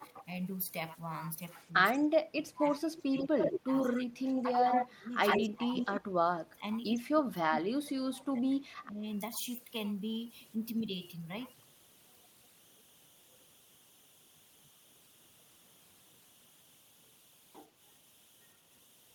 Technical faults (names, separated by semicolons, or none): converter idle tones; speech suppressed in double talk; echo leak